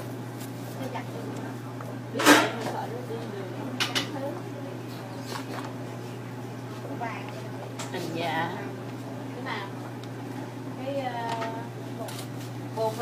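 No technical faults can be heard anywhere in the audio.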